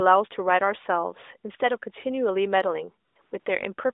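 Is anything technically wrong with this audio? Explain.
Yes. Near the end, the background drops out three times and is replaced by synthetic AMR comfort noise. This happens at 3.08 to 3.16 s, 3.22 to 3.32 s, and 3.40 to 3.46 s, lasting 80, 100 and 60 ms. The phone judged the talker silent and stopped sending speech frames. The receiver then generated noise from a rough level and spectrum estimate. The real background gives way to a smooth, steady hiss that switches in and out. All of it sits within the narrowband AMR line of roughly 300 Hz to 3.7 kHz.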